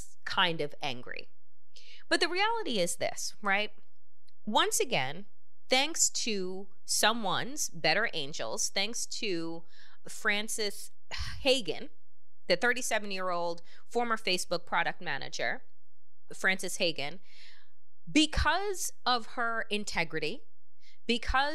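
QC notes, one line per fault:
Throughout: DC offset. The whole speech waveform sits shifted off zero by a constant, at about -34 dBFS. You cannot hear it as a sound. It shows as steady energy at 0 Hz and quietly eats headroom, so peaks clip sooner on one side.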